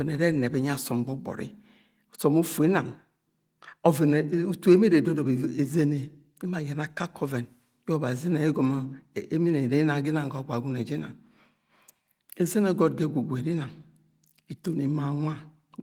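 No technical faults can be heard anywhere in the recording. The speech carries the light, faint colouring of Opus voice compression working normally, with the band reaching up to about 23.5 kHz, which fits a full-band setting at a rate around 24 kbps.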